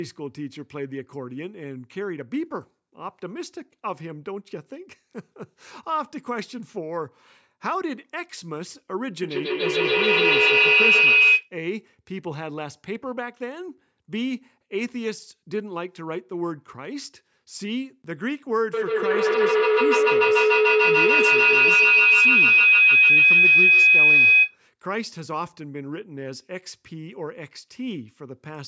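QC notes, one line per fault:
9.22 to 11.52 s and 18.74 to 24.6 s, feedback howl: a second device in the room is picking up the call's loudspeaker, so each trip round the mic-to-speaker loop comes back louder instead of dying away. It narrows to a shrill tone around 3 kHz, pulsing roughly every 150 ms as it circles the loop, and peaks about 12 dB over the speech in the first burst and about 13 dB in the longer second one.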